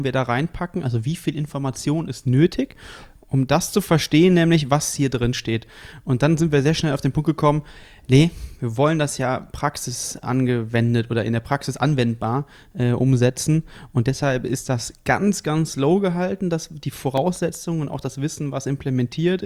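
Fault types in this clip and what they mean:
CD scratch ticks: from 16.80 to 17.55 s, five brief ticks, each only a few milliseconds long, recur about six or seven times a second. A surface blemish defeats the disc's error correction once per revolution, so the player patches or mutes the damaged samples.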